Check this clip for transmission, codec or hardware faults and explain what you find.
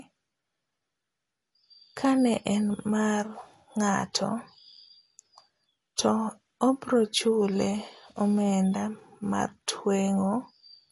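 One fault runs through the whole recording. The speech sounds watery and swirly, with nothing above 11.3 kHz. That is likely MP3 compression starved of bits, which fits a rate near 48 kbps, so the encoder cuts treble and drops weak frequency lines.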